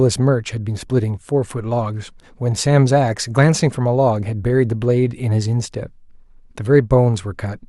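Nothing stood out as a technical problem anywhere in this speech recording.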